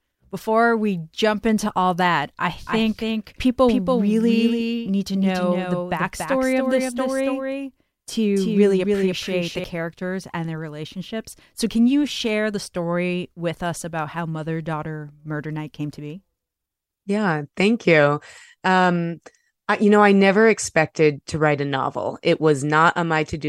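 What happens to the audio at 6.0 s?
At 6.0 s the speech is heard twice: a second, full-band copy trails the original by roughly 300 ms, about 5 dB quieter, with no reverberant tail or room colour. This is a doubled audio track, running from 2.66 s to 9.64 s, where the copy cuts in and out abruptly. It is likely caused by the same signal being captured again through a slower path, or by an edit that left two copies out of step.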